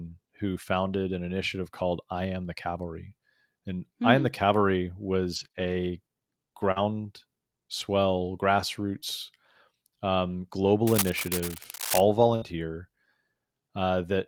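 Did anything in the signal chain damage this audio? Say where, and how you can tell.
Yes. The damage comes from the network path and from the analogue wiring.

Network stage: lost packet rebuilt from error correction. Just after "who founded an initiative", at 1.79 s, and again at 8.96 s, a 20 ms stretch turns rougher and noisier. Nothing drops out. This fits one lost packet each time. The decoder played the lower-bitrate backup copy carried in the next packet.

Network stage: scattered short gaps. Between 4.55 and 7.82 s there are about three brief hiccups, the longest around 40 ms. Each one is a tick or smear. The receiver patched each hole by extending the preceding sound.

Network stage: short concealed packet loss. At 9.00 to 9.04 s, right after the second rebuilt packet, a 20 ms piece never arrived in time. You hear a quick smear. The receiver continued the last sound to cover the hole, then blended back into the real signal.

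Analogue wiring: cable scratch noise. From 10.87 to 12.01 s, dense, uneven rustling sits over the sound at about 5 dB below it. The likely cause is a worn cable or connector being moved. Its contact resistance jumps rapidly and injects noise bursts.

Network stage: burst of packet loss. At 12.36 to 12.44 s, about 60 ms of audio is missing. The receiver held and faded the last sound across the gap, so you hear a short buzz or hiss. The audio then picks up further on, with that piece skipped.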